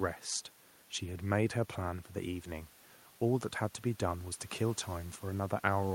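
Speech recording with no technical faults in the signal chain.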